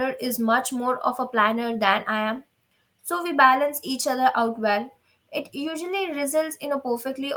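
No technical faults can be heard anywhere in the recording.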